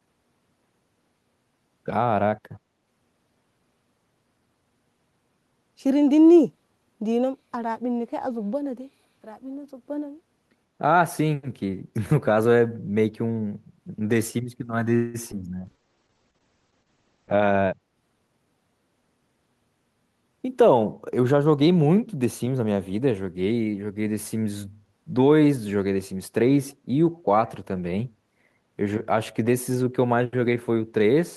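At 14.95 s the speech stalls for about 0.19 s: the last sound is stretched into a brief fading buzz and then resumes from exactly where it stopped, with nothing lost. This call audio freeze was likely caused by packets held up in transit, emptying the jitter buffer. The receiver filled the 186 ms wait with continuation of the previous sound, so the stream was simply delayed by that amount.

At 15.32 s there is the opposite effect: an abrupt jump forward, with the speech on either side of the join butted together almost seamlessly. About a tenth of a second of audio is gone. This skip ahead happens when a stretch is discarded while later audio is already queued. Here it takes back roughly half the delay the freeze had just added.

From 15.59 s to 17.86 s the speech turns rough and muffled, losing its brightness. This is a call bitrate drop. The bandwidth estimate fell and the encoder went from 32 kbps to 9 kbps, holding the lowest rate for about 1.8 s. 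At that rate the coding becomes coarse and the audio band narrows from 20 kHz to roughly 8 kHz, which accounts for the dull, grainy quality until it recovers.

Overlapping that, from 15.73 s to 16.33 s, the speech drags at unchanged pitch, running at about 81% speed with drawn-out sounds. This is a jitter buffer slow-down. With its reserve running low or its target delay just raised, the receiver repeated single pitch periods and bits of pause over and over, inserting 122 ms in total to rebuild the buffer.

From 17.01 s to 18.46 s the speech instead sounds hurried, again at the same pitch, running at about 113% speed. This jitter buffer speed-up happens when the buffer holds more audio than its target. The receiver trims short pieces one or a few pitch periods long, repeatedly, removing around 200 ms to bring the delay back down.

At 27.14 s a very faint, brief copy of the speech surfaces, trailing the original by 146 ms and sitting far below it, around 40 dB quieter. 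This echo leak is likely one side's loudspeaker output reaching its microphone and slipping past the echo canceller. The leftover was sent back, so a short scrap of delayed speech is audible.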